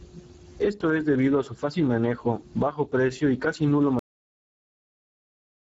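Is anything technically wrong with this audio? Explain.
Yes. Two faults are audible.

The whole clip carries Speex codec damage, and it is plainly audible. This low-bitrate CELP speech coder, here at about 9.8 kbps, has too few bits to model the excitation faithfully. The speech comes out grainy and hoarse. Nothing is present above 7.7 kHz. The upper band sounds like a smeared, noise-like fill rather than real detail.

There is also a cut-off end at 3.99 s. The final stretch of audio was never delivered to the output. The speech stops abruptly in the middle of a sound. It falls straight to digital silence with no natural decay, and that silence runs to the end of the clip.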